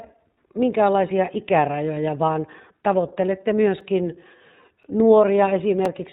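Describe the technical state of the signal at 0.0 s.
Right at 0.0 s the speech is already running through the iLBC codec, and that holds for the whole clip. Each short frame, which sounds like 20 ms, is coded on its own, so the speech comes across slightly rough and synthetic, with nothing above 4 kHz. The damage is plainly audible and fits iLBC's 15.2 kbps mode.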